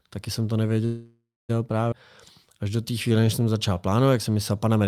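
Right after "taky jsem to", from 0.85 to 1.51 s, the sound hangs on as a buzzy smear that fades into silence for roughly the last 0.26 s, then resumes where it stopped with nothing lost. This is a call audio freeze, likely packets held up in transit until the jitter buffer ran dry.

At 1.91 to 1.94 s the speech jumps abruptly forward across a tiny join, with about a fifth of a second of audio gone. This skip ahead comes from a stretch being dropped while later audio was already queued, so the two sides butt together.

From 2.46 to 4.31 s the speech drags at about 89% speed with unchanged pitch, sounds stretched out, adding 208 ms in total. This jitter buffer slow-down repeats single pitch periods over and over to rebuild a reserve.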